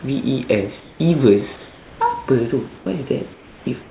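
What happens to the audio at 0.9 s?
From 0.80 to 1.00 s, comfort noise replaces the background in this speech pause. For those 200 ms, the real room noise, about 27 dB below the loud speech, turns into a steady, featureless hiss about 1 dB quieter. The likely cause is discontinuous transmission. The sender stopped sending audio when it detected no speech, and the receiver filled the gap with synthetic noise shaped like the background.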